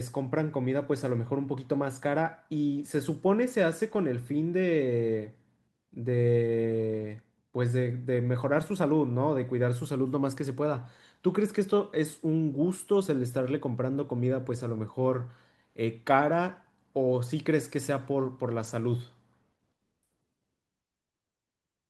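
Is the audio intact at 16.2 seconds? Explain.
No. At 16.21 s, what sounds like one lost packet was rebuilt from error correction: the decoder played a rough low-bitrate copy, so 20 ms of speech turns briefly grainy and noisy without any gap.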